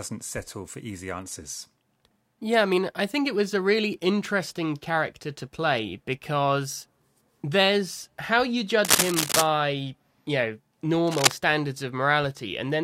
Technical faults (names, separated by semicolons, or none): cable scratch noise